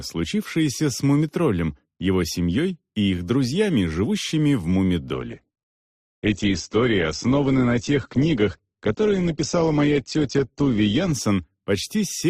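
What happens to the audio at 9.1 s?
At 9.1 s the audio is in the middle of a switch to an adaptive stream at a lower bitrate, running from 5.13 s to 11.13 s. The stream dropped to a leaner encoding, and the quality change comes abruptly with no gap. Nothing is present above 8.2 kHz, so the treble is gone and the top end sounds dull. This fits a fall from roughly 64 to 12 kbit/s Opus.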